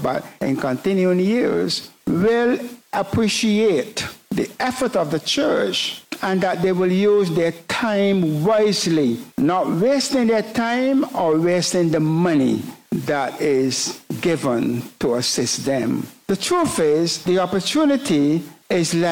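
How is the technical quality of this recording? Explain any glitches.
No glitches are audible anywhere in the recording, so there is nothing here to explain.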